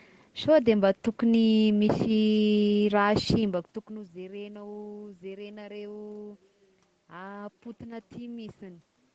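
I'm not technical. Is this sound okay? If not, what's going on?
Yes, there are no faults.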